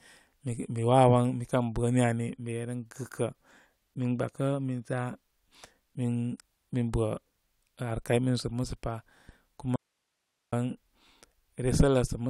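The signal feeding the speech likely broke off while the path downstream stayed live, producing an audio dropout to a faint residue from 9.76 to 10.53 s. For about 0.77 s the speech cuts abruptly to hiss lying roughly 55 dB below normal level.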